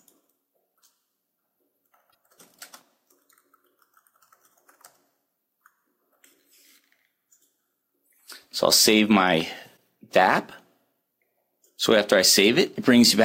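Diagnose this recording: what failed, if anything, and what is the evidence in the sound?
The fault sits at the codec stage. At 2.10 to 2.13 s there is a brief glitch that breaks the continuity of the sound, and a shorter one recurs at 9.76 s. Both are on the scale of a single 26.1 ms MP3 frame. The likely cause is a broken MP3 bit reservoir. After frames were lost, the next frame looked back for borrowed data and decoded bytes belonging to another frame.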